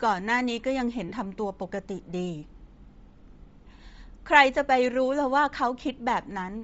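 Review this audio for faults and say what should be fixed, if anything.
The whole clip has a breathy, grainy edge on the speech with a thin, noise-filled top end, which is likely Bluetooth LC3 compression at a low bitrate, consistent with a 32 kbps stream. Around 1.09 to 1.12 s there are lost LE Audio frames: for about 30 ms the decoder repeats the previous spectrum with scrambled phase, leaving a short noisy smear. To prevent both, raise the LC3 bitrate and tighten the Bluetooth link by cutting distance and interference.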